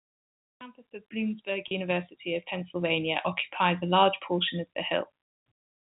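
At 1.68 s there's a brief packet loss with pitch repetition, running to about 1.71 s. Roughly 30 ms of audio went missing, which fits a single dropped packet, and the receiver covered the hole by looping the last pitch cycle of the voice. Because the gap is so short, you don't get a fade to silence, just a momentary held, slightly buzzy tone before the speech picks up again, all within the telephone band the G.711 coding leaves above 4 kHz cut off.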